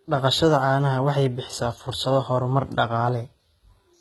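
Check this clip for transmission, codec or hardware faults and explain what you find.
There's one codec problem running through the whole speech recording. The top end is synthetic, cutting off around 11.8 kHz, with gritty, metallic sibilants. That's likely HE-AAC compression rebuilding the treble from copied lower bands, consistent with a very low bitrate of around 16 kbps.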